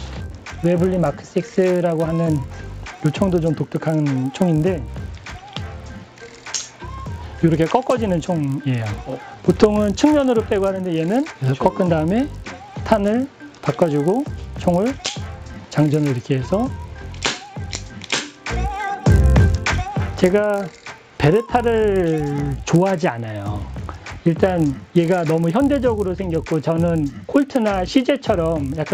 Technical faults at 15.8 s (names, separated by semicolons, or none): resampler restarted on every block